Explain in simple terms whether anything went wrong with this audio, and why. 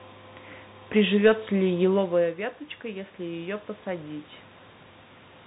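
Two things went wrong. The first is a DC offset that runs through the whole recording: the entire waveform sits shifted away from the centre line. You can't hear it directly, unlike hum or buzz, which have an audible tone. It quietly wastes loudness room and shows up only as a steady push at the very lowest end of the sound.

The second is automatic gain rising, from about 1.61 to 4.14 seconds. Around 2 seconds the talker moves and gets much quieter at the microphone, so the system's automatic volume control slowly turns itself up to compensate. The room noise swells along with the voice over those couple of seconds, and that is the giveaway. If the talker had simply come closer, only the voice would get louder while the background stayed put.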